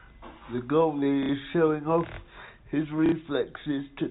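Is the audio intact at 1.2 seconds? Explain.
No: from 1.23 to 1.29 s, packet loss with last packet repeated replays about 60 ms of one packet, giving a robotic stutter, seen as identical repeated waveform blocks.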